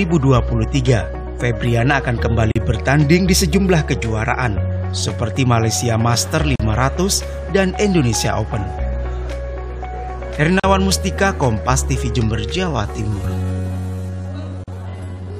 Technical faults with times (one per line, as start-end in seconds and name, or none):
2.52-2.56 gap at a join of encoded pieces
6.56-6.60 gap at a join of encoded pieces
10.60-10.64 gap at a join of encoded pieces
12.36-15.39 time-stretched section
14.64-14.68 gap at a join of encoded pieces